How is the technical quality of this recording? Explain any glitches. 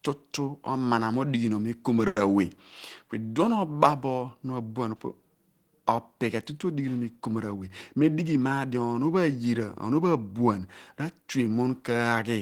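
Two network glitches affect the recording. Both come from packets arriving off schedule.

The first is a short stall from a late packet, from 2.07 to 2.18 s. A packet did not arrive on time, so the jitter buffer ran dry. The receiver held the last sound for about 90 ms until the packet turned up, then resumed where it left off. Nothing is lost. One sound is drawn out, with a faint buzz or dip, and everything after it runs 90 ms later.

The second is a jitter buffer speed-up, from 7.94 to 8.75 s. Delayed packets had piled up, so the buffer held more than it wanted. To shed the extra delay, the receiver cut many tiny pitch-period slices in quick succession, removing about a tenth of a second in total. The speech plays at 110% speed with unchanged pitch, so this stretch sounds hurried.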